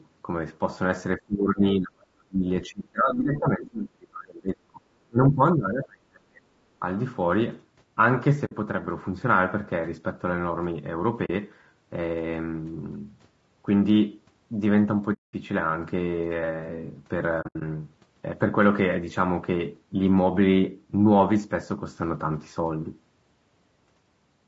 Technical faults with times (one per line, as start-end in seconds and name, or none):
0.00-24.48 low-delay AAC compression
1.16-6.45 speech suppressed in double talk
8.45-8.52 AAC frame loss with muting
11.25-11.30 AAC frame loss with muting
15.13-15.34 AAC frame loss with muting
17.41-17.62 AAC frame loss with muting